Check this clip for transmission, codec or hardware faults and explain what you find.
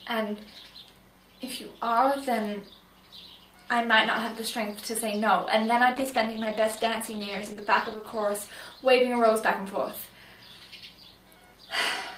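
One fault stands out: a call bitrate drop from 5.95 s to 9.81 s. The bandwidth estimate fell, so the encoder coded more coarsely. The sound turns rough and muffled, which fits a fall from 48 to 12 kbps, worst for about 2 s.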